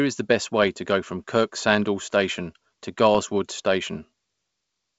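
Bit errors on an ADPCM link cause short rough pops at 0.63 to 0.68 s and 3.15 to 3.20 s. Flipped bits, at a rate of around a tenth of a percent, throw the decoder's step size and predictor off, so each hit rings on briefly with a jolt in level.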